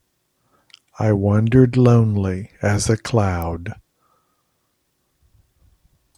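At 3.42 s there's a sharp snap sitting on top of the speech, an electrical switching spike peaking somewhere around -15 dBFS. It's most likely a nearby switch or static discharge arcing briefly and the audio line picking up that burst.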